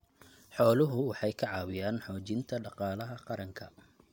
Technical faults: none

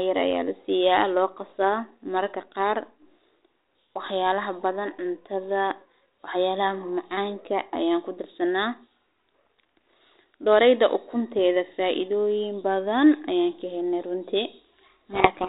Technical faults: codec payload misread

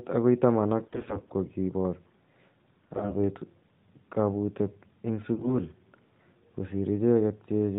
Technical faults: AMR bit errors

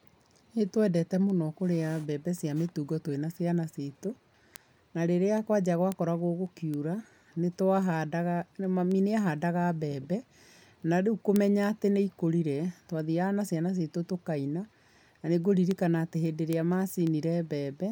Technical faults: word clock ticks

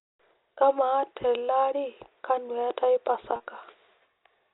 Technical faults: packet loss with pitch repetition

